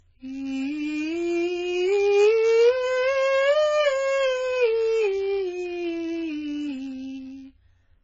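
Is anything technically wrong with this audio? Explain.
Yes, this music clip has two faults, both present from start to finish.

The first is a block size mismatch (padded). One stage in the chain hands over shorter blocks than the next stage expects, and the missing tail of each block is filled with silence. Those tiny gaps repeat at about 91.5 Hz, producing a steady buzz riding on the music. Because silence is added rather than audio lost, playback runs slightly slow, at 0.996 times normal speed, while the timbre stays put. Mains hum would be a smooth tone at 50 or 60 Hz and would not change the timing. This buzz is a gated, rasping pattern tied to the block rate.

The second is heavy AAC compression, likely from AAC-LC at a very low bitrate. Nothing is left above 7.5 kHz, so the top end is dull and airless. Below that, the coder has quantised the spectrum coarsely against its hearing model, leaving gaps and substituted noise. 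Sustained tones warble and turn fizzy, and the sound is smeared. A simple low-pass filter would remove the highs but leave what remains clean. The swirling, unstable texture is what marks this as codec damage.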